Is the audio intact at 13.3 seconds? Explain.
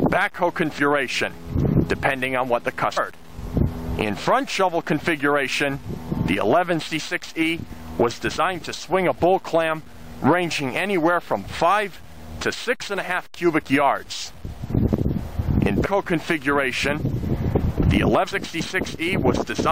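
Yes, at 13.3 seconds the audio is intact, with no dropout, glitch or other fault audible at that point.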